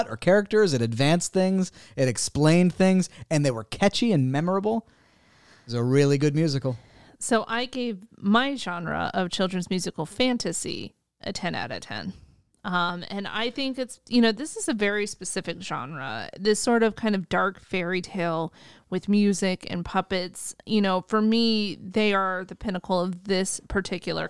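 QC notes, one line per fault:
No faults found in this clip.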